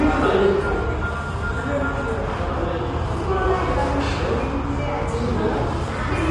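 Low-delay AAC compression, likely AAC-ELD, runs throughout: coarse coding at the low bitrate turns the detail into a rough, grainy texture, with nothing above 11.5 kHz, consistent with roughly 32 kbps.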